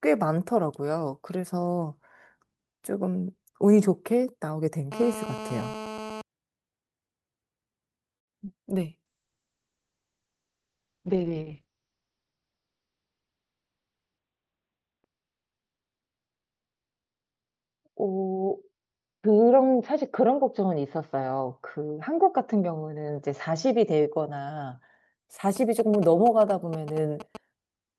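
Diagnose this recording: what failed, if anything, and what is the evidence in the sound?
GSM phone buzz, 4.92 to 6.22 s: analogue wiring picked up a nearby 2G handset in a call. Its radio bursts at 217 Hz were rectified into a hard, raspy buzz rich in harmonics, held steady at about 11 dB below the speech.

Call audio freeze, 8.17 to 8.35 s: the speech stops for 160 ms of silence, then resumes where it left off with nothing lost. The likely cause is a network delay that emptied the jitter buffer, which added 160 ms of lag to the call.

Short concealed packet loss, 8.45 s: 20 ms of audio never reached the decoder, so the receiver extended the preceding sound to cover the hole and blended back. The result is a brief smear or wobble in the speech.

Call bitrate drop, 9.07 to 25.33 s: the network's bandwidth estimate fell, and the codec was pushed from 48 kbps down to 7 kbps, staying at the bottom for 5.78 s. 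Bandwidth shrank from 20 kHz to 4 kHz, leaving the speech muffled, rough and watery.

Jitter buffer speed-up, 12.01 to 12.53 s and 18.72 to 19.31 s: call processing trimmed a backlog by cutting pitch-period-sized pieces. The speech runs 12% and then 14% faster at unchanged pitch and sounds hurried, with roughly 70 ms and 100 ms removed.

GSM signalling bursts, 25.56 to 27.37 s: a handset that was not in a call sent short groups of 217 Hz radio bursts into the analogue path. Once rectified, they produce a galloping dit-dit-dit of brief buzzes at about 10 dB below the speech.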